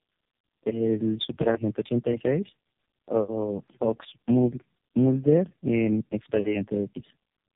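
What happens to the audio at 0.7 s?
At 0.7 s you're hearing tandem speech coding, which runs through the whole clip. The speech went through three low-rate codecs in a row, each re-coding the last one's damage, so it sounds rough, muffled and warbly, with nothing above 3.8 kHz.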